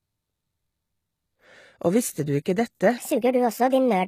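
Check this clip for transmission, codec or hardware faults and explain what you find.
Two faults are present: codec damage throughout the speech, and a section near the end played at the wrong speed.

HE-AAC compression, throughout: nothing sounds above 14.9 kHz. The treble is likely rebuilt by spectral band replication at a rate fitting about 20 kbps, leaving plainly audible codec damage.

Section at the wrong speed, from 2.98 s to the end, just after "visste du ikke dette": playback runs 1.37 times fast, likely from a clock mismatch. Pitch rises about five semitones, so the speech sounds high and hurried.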